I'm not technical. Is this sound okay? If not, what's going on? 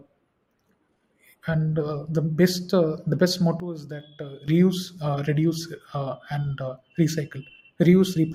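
No. There is a sudden gain jump from 3.6 to 4.48 seconds: the speech drops abruptly to a much quieter level, then snaps back up at 4.48. The background noise falls and returns along with it. This is likely a volume setting that was changed instantly instead of being faded in and out, so the level steps down and back up in a single moment.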